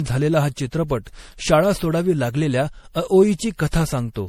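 Throughout, the speech sounds swirly, hollow and smeared, with blurred attacks: likely generation loss from around seven repeated MP3 encodes at what sounds like 64 kbit/s.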